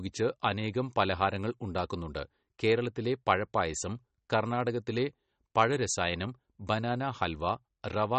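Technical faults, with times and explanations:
Throughout, MP3 compression: likely a low-bitrate encode, around 32 kbps, cutting treble above 8.4 kHz and dropping weak detail, leaving speech watery, swirly and dull.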